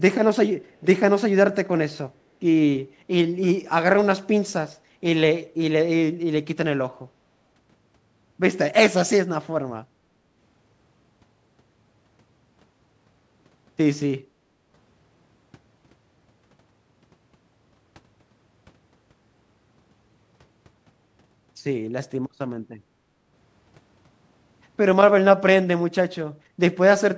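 At 0.65 to 0.78 s a faint delayed copy of the speech surfaces, very far below the direct voice and trailing it by 431 ms. This is an echo leak, likely from the far end playing the call on a loudspeaker while its echo canceller let a scrap of the pickup through. On a spectrogram it appears as a weak smear repeating the speech pattern about 0.43 s later; the waveform barely changes at that level.

The background is gated by the echo canceller twice, at 22.9 to 23.08 s and at 26.4 to 26.59 s. Each time the microphone was turned down hard while the loudspeaker played, so the room sound dips by about 12 dB and then about 14 dB for roughly a fifth of a second before recovering. The waveform shows a brief notch in the noise floor, and the spectrogram shows a short vertical band where the background fades across all frequencies up to the 8 kHz limit.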